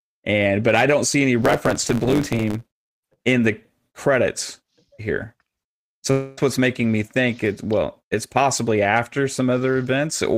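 From 1.42 to 3.16 s the speech shows a block size mismatch (truncated): each block loses its tail, leaving a 100 Hz buzz at the block rate and playback running 1.09 times fast, so pace rises while timbre holds. At 6.11 to 6.38 s the sound continues as a fading buzz or hiss for about 260 ms, then resumes with that stretch missing, likely a long network dropout where the receiver filled the gap.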